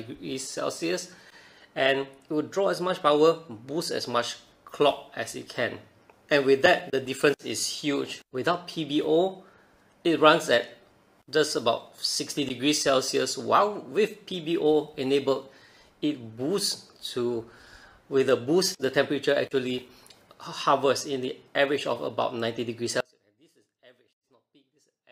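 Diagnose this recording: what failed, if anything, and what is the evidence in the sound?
An audio dropout to a faint residue begins abruptly at 23.00 s and lasts to the end of the clip. The wanted signal cuts out mid-flow and leaves only faint sound, about 30 dB below its normal level. The abrupt drop tells it apart from a pause or a fade, and the lingering residue separates it from a clean cut to silence. The likely cause is a break upstream in the analogue wiring or input connection, while the later stages of the path stayed live.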